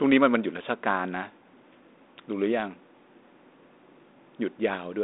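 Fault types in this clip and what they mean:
No faults in this clip.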